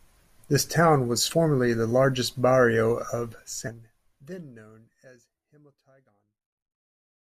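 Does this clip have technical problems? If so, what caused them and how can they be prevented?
Yes. This speech has compressed frames skipped twice. At 1.29 to 1.34 s, between "town was" and "the largest barrio of", roughly 70 ms of audio vanishes. At 3.67 to 3.70 s, just before "then known as", around half a second is lost. Whole frames were missing or rejected as damaged by the decoder. The jumps fit 20 ms frames. The fade-out that starts near 3 s is intentional. Preventing this needs intact transfers, plus error protection or retransmission for damaged frames.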